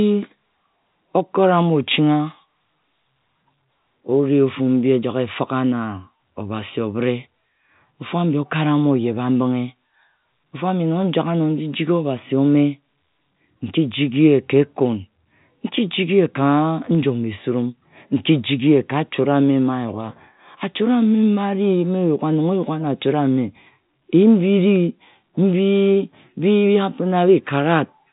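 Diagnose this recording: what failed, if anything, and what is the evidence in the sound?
A single sharp tick at 24.76 s, broadband and unrelated to the speech around it, marks a bit error spike. One flipped bit in memory or on a digital link threw three consecutive samples off by a power of two before the signal snapped back. The telephone-band G.711 A-law coding, with nothing above 3.8 kHz, is not the source.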